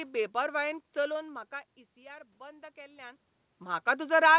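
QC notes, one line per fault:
1.23–3.28 s, automatic gain rising: voice and background noise swell together by about 4 dB as the gain control compensates for input that fell about 18 dB when the talker moved away.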